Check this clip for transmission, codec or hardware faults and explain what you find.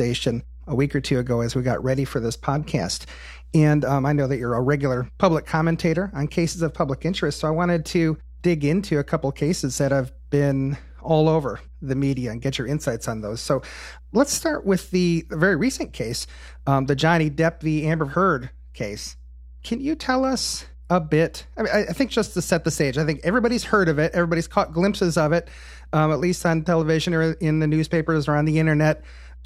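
One hardware fault runs through the whole speech clip: mains hum. It starts at the beginning and never lets up. A steady low tone sits under the speech at 60 Hz. A ground loop or a nearby transformer has let the power line leak into the signal path. The tone sits roughly 20 dB below the speech. It gives the audio a constant low buzz underneath everything.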